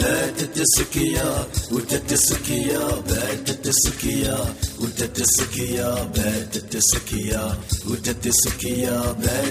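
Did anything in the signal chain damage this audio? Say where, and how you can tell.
No, nothing audible in this recording points to damage at any stage of the signal chain, with no dropouts, distortion or other disturbances in the signal.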